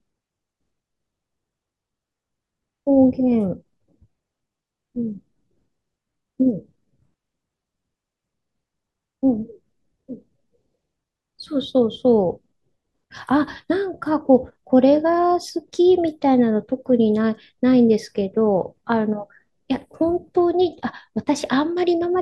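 No technical faults can be heard anywhere in the speech recording; the signal stays continuous and steady throughout, with nothing in it that points to a problem in capture, transmission or playback.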